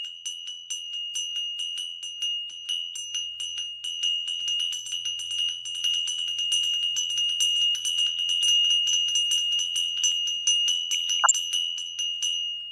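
Audio with MP2 compression audible throughout: the top end sounds dull and a gurgling, granular roughness rides on everything, as if too few bits were spread over the 32 sub-bands. On a spectrogram, upper bands blink on and off in blocky patches, which fits a low rate around 80 kbps. From 4.40 s to 10.12 s a doubled audio track appears. A full-band copy at roughly the same level trails about two seconds behind, with no decay or room colour, and it switches in and out abruptly. The waveform shows the same shapes repeated at that fixed offset. The cause is likely a second capture path or an edit holding two copies out of step. Between 10.93 s and 11.31 s comes DAB burbling, a brief bubbling of noise blips. Uncorrected bit errors at a low rate, well under one percent, corrupt samples, so short blips of noise appear in single sub-bands. On a spectrogram these show as bright, isolated patches, each confined to one sub-band.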